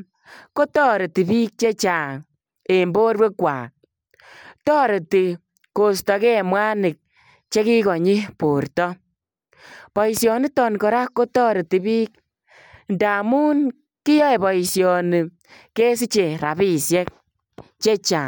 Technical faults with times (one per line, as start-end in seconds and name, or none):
none